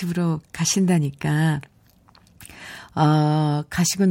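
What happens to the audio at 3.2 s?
Nothing goes wrong at 3.2 s; the audio runs through that moment intact, with no fault to be heard.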